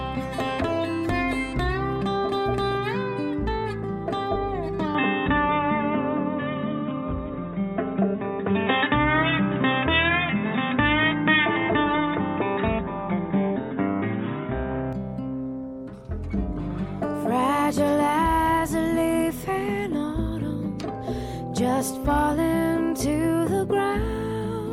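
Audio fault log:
4.95 to 14.93 s, input switched to a poorer device: the sound abruptly turns dull and boxy, with nothing above 3.8 kHz, a level shift of roughly 5 dB and a new, faint noise floor around 35 dB below the signal, then clears again at 14.93 s with no gap at either change. On a spectrogram the upper band is cut off flat for that stretch, and the waveform's envelope steps in level. The cause is likely a switch to a narrower-band microphone or headset profile.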